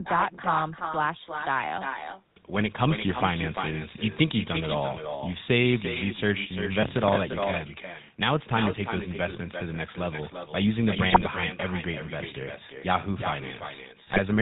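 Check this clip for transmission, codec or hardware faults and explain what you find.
Four kinds of fault are present: unremoved echo and GSM full-rate coding throughout, one crackle burst, and two bursts of GSM bit errors.

Echo with no canceller, throughout: the far end's loudspeaker feeds its microphone uncancelled, so the speech returns about a third of a second later, about 8 dB quieter.

GSM full-rate codec, throughout: pulse-excited vocal-tract modelling, consistent with the 13 kbps full-rate coder, removes everything above 4 kHz and leaves the speech plainly buzzy and gravelly.

Processor overload crackle, 6.83 to 7.16 s: the processor missed roughly fifteen buffer deadlines, which fits a buffer of about 5 ms. Each miss replays a hard-edged scrap of old audio, heard as gritty tearing.

GSM bit errors, 11.08 to 11.22 s and 14.06 to 14.19 s: corrupted filter, pitch and gain values reach the decoder, about six or seven frames' worth each time, producing squawks, pops and gargling.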